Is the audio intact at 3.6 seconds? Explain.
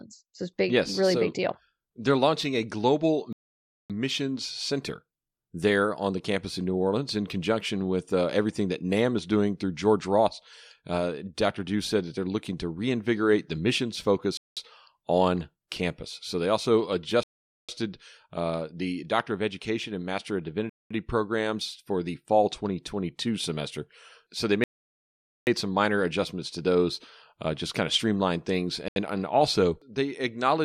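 No, 3.6 seconds lands right in the middle of a gap. From about 3.33 to 3.90 s the speech drops out to dead silence for roughly 0.57 s, then carries on as if nothing happened. That's the classic shape of a Bluetooth stall: the likely story is that interference delayed packets on the wireless link, the headphones' buffer emptied, and playback simply froze until the resent data showed up.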